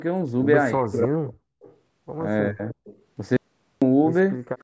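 From 0.74 to 1.46 s the speech sinks hard, at its worst around 40 dB down. That's speech suppressed in double talk. With both ends talking at once, the echo canceller likely couldn't tell this talker apart from its own loudspeaker echo, so it turned everything down. It does it again more briefly from 2.48 to 2.79 s, with a similar deep dip.

Next comes an echo leak, a faint delayed copy of the speech about 0.3 s behind the original. It appears from 1.62 to 1.77 s, roughly 30 dB below the speech. It returns a little louder from 2.7 to 3.03 s, overlapping the tail of that second dip, and again very faintly from 4.58 s to the end. The far end is likely on a loudspeaker, and its canceller let some of what its microphone picked up slip back into the call.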